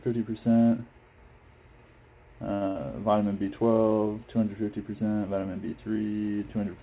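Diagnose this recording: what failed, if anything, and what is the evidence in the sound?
A short stall from a late packet sits at the network and jitter-buffer stage: from 2.54 to 2.63 s the sound is held for 70 ms, then resumes where it left off, with nothing missing. A spectrogram shows frozen, smeared bands; the waveform shows a repeating cycle. Playback runs about 70 ms later afterwards.

A burst of packet loss follows from 2.67 to 2.77 s. The receiver extends the last sound for about 83 ms, fading it, and then skips ahead past 80 ms of lost audio. Within the G.711 path's band below 4 kHz, the spectrogram shows a decaying, blurred patch, and the waveform shows a shrinking repeat followed by a discontinuity.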